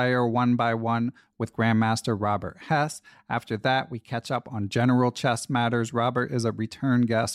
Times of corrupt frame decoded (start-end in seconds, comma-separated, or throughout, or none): none